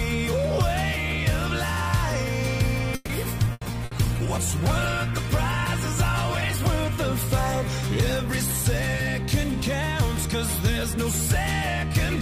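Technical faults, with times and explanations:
2.95–3.12 s, call audio freeze. The last sound is held and stretched for about 140 ms as a fading buzz or hiss, and then the audio carries on from where it stopped. Nothing is lost, so the only effect is an inserted pause. The likely cause is packets held up in transit, leaving the jitter buffer empty. The receiver filled the wait with continued sound, and the playback delay grew by 140 ms.
3.41–6.79 s, call bitrate drop. For about 3.4 s the sound turns coarse, rough and watery, and the top end is dulled. The bandwidth estimate fell, and the encoder went from 128 kbps to just 17 kbps and stayed at that floor for the whole stretch. At so few bits the codec quantises coarsely and cuts away the high frequencies. Full quality returns at 6.79 s.
3.45–3.49 s, skip ahead. Playback lurches forward with almost no gap, only about 10 ms of filler at the join. 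Roughly 70 ms of audio is missing, and the sound on either side is butted together almost directly. A stretch was dropped while later audio was already queued, probably in transit or when the jitter buffer overflowed. That trimmed the playback delay by about 50 ms.
3.52–3.64 s and 3.85–3.94 s, burst of packet loss. Each time the last sound is carried on and faded, heard as a short held buzz or thinning hiss, and then the audio resumes further along. The first burst loses 120 ms of audio, covered by 90 ms of concealment, and shortens the delay by 30 ms. The second loses 60 ms, covered by 60 ms of fill. Consecutive packets were lost or arrived too late to be played.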